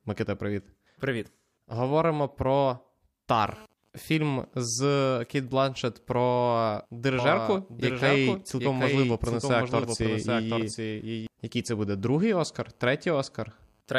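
From 7.19 to 11.27 s there's a doubled audio track: a second copy of the speech trails roughly 0.7 s behind, a few dB quieter, likely from a slower capture path.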